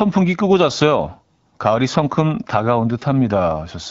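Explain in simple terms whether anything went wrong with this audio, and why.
Nothing went wrong with this audio: the speech comes through the HD Voice phone coding as it should, with no faults to point to.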